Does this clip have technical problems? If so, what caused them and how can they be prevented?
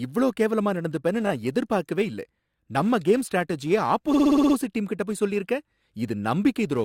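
Yes. The speech stutters twice. A 20 ms slice replays twice more between 1.26 and 1.32 s, and a 60 ms slice loops seven extra times from 4.13 to 4.55 s, adding 420 ms. These are repeated frames: compressed frames were sent or written again. Discarding duplicate frame sequence numbers before decoding prevents this.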